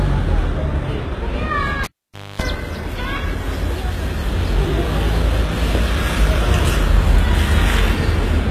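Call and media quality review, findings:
Whole clip: treble sounds synthetic and gritty, with a metallic, smeared top end where harmonics don't line up, and nothing above 14.9 kHz. Likely HE-AAC compression, at a rate that fits a 20 kbps stream. Spectral band replication copies lower bands upward under a coarse envelope, so brightness survives but the upper spectrum isn't the original. Codec damage plainly audible.

1.84–2.42 s: cable pulled and plugged in. Pop, then about 0.53 s of near silence, including a 255 ms burst of 50 Hz mains buzz while only the plug tip makes contact. A second pop follows as the signal returns. Points to a loose or reseated connector on the capture path.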